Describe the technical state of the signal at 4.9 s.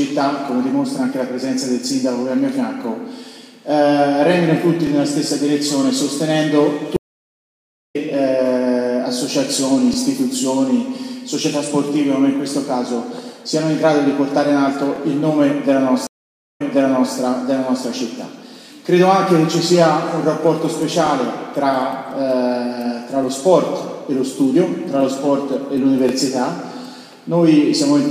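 Right around there you hit an overlapping chunks fault, running from about 4.87 to 4.89 s. The audio was handled in 5-second blocks, and the next block started a little before the previous one finished, so about 25 ms of sound plays twice at the join. It comes across as a quick click or tiny stutter, a brief hiccup where the same sliver of audio repeats.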